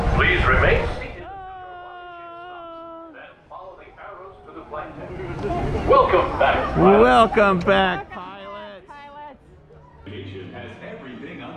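Zipper noise occurs at 0.73–1.24 s, 4.35–5.63 s and 7.81–8.24 s. Each level move of about 20 dB (down, up, then down) is applied in unsmoothed 2 dB, 1 dB and 2 dB steps, at roughly twenty per second, leaving a fast ticking on the sound.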